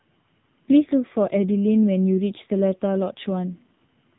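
From start to finish the speech carries heavy AMR narrowband mobile codec damage. Nothing above 3.8 kHz survives, so sibilants and breath detail are gone. The voice is rebuilt from a vocal-tract model driven by sparse pulses. At this low rate, which fits the 6.7 kbps AMR-NB mode, too few bits describe each 20 ms frame. The result sounds buzzy and synthetic, with a thin, boxed-in telephone quality across the whole clip.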